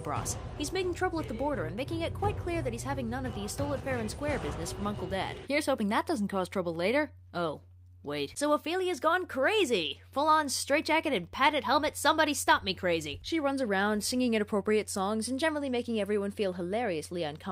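No technical faults can be heard anywhere in this recording.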